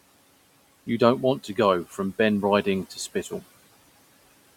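No technical faults can be heard in the speech, and the only other sound is the room's own background noise sitting about 22 dB below the talking, which belongs to the recording rather than to the system.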